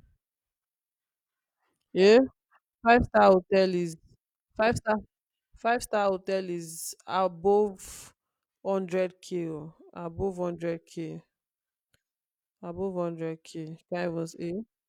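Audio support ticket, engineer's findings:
Nothing in the speech stood out on listening, so no fault is logged against this clip.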